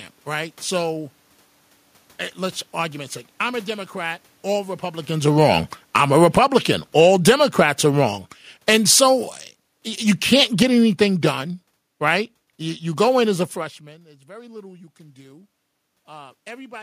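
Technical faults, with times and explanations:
5.14–13.61 s, automatic gain falling: after the talker moves closer near 5 s, the gain control lowers gain about 18 dB, so voice and room noise sink together.
13.79–16.77 s, automatic gain rising: the talker moves away near 13.5 s, dropping input about 23 dB; gain climbs only about 4 dB, recovering little level.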